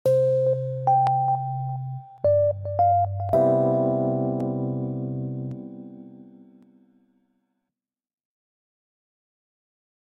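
A regular click recurs about every 1.11 s from 1.07 s to 9.96 s, roughly ten in all. These are clock drift buffer slips, likely from two mismatched device clocks dropping or repeating a few dozen samples.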